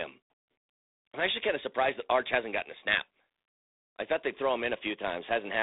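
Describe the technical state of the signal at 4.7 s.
At 4.7 s the speech is still passing through G.726 ADPCM coding, which runs through the whole clip. Too few bits describe each sample's deviation from the predicted value, a coarseness that fits 24 kbit/s, so a harsh, rasping hiss rides on the voice and swells with its level. Nothing above 3.8 kHz passes, leaving a narrow 300 Hz to 3.7 kHz telephone band.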